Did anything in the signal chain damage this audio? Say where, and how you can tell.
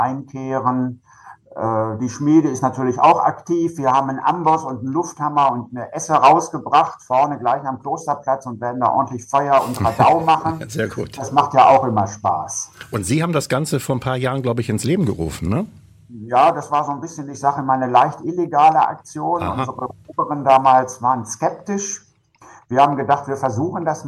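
No, nothing in the signal chain audibly damaged this audio. No stage, from the analogue wiring and converter through to storage and playback, leaves a mark anywhere in the sound.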